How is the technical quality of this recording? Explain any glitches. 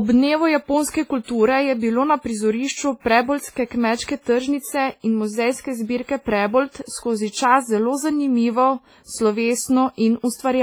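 The technical quality is poor: heavy coding damage runs through the whole speech recording, with three audible pre-echo smears.

WMA compression, throughout: the speech sounds washy and ringing, with hiss breathing alongside it. This is likely a transform codec at a low bitrate, around 24 kbps, zeroing weak detail.

Pre-echo, at 1.24–1.28 s, 3.00–3.05 s just after "na prizorišču", and 7.30–7.34 s: block-wide quantisation noise leaks about 45–51 ms ahead of sharp attacks, adding hiss before them and softening each onset.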